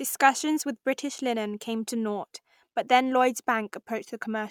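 No technical faults can be heard anywhere in the recording, and the signal stays steady and intact throughout.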